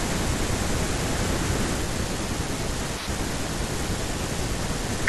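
Speech with a doubled audio track until 1.82 s: a dry copy roughly 200 ms behind, about 5 dB down, stops abruptly, likely from a slower second capture.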